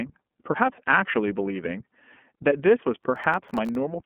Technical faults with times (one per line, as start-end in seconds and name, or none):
0.00-4.05 iLBC codec
3.04-3.75 processor overload crackle